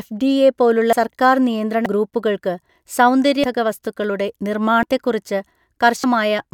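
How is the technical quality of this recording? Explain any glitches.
The speech is marred by repeated skips: at 0.93, 1.86, 2.69, 3.44, 4.83 and 6.04 s the audio jumps forward, each time losing roughly a tenth of a second, though about 0.3 s goes at 3.44 s and about 0.2 s at 6.04 s. The likely cause is a dropped buffer (overrun), where captured samples were overwritten before being read and the surviving edges were butted together. On a waveform each shows as an abrupt discontinuity; a spectrogram shows a thin vertical broadband line with mismatched speech on either side.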